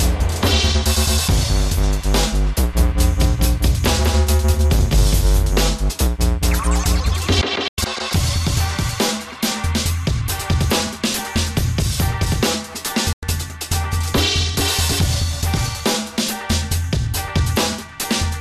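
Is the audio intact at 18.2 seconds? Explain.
Yes, the audio at 18.2 seconds is intact, with no dropout, click, distortion or other fault at that moment.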